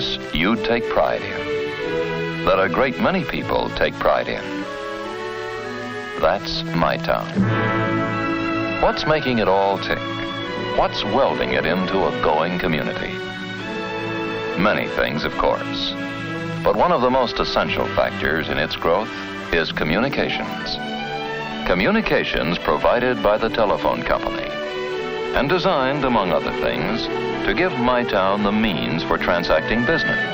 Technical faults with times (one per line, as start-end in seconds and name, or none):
29.08-30.34 loudspeaker feedback squeal